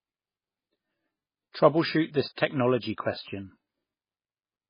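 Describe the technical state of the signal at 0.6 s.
At 0.6 s, as throughout, the speech stops dead at 5.1 kHz and sounds watery and swirly. That's likely heavy MP3 compression, fitting roughly 16 kbps, cutting treble and flickering weak bands.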